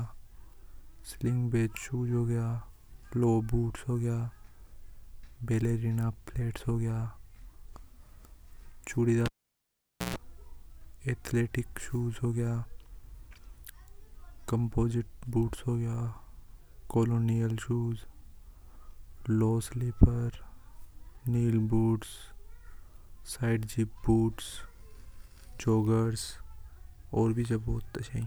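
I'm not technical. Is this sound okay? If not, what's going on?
No. A cable was pulled out and plugged in again while recording, from 9.26 to 10.16 s. You hear a pop, the speech drops to near silence for about 0.85 s, then a short electrical buzz from the 60 Hz mains as the plug reconnects, and another pop.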